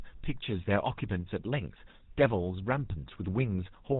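From the first moment to the last, the speech carries the GSM full-rate codec's signature. The coder rebuilds the voice from a vocal-tract model excited by a coarse, regularly spaced pulse train, so fine detail in the excitation is thrown away, and nothing survives above 4 kHz. The damage is plainly audible: a buzzy, gravelly roughness over the voice, with dull, band-limited highs, consistent with a bitrate around 13 kbps.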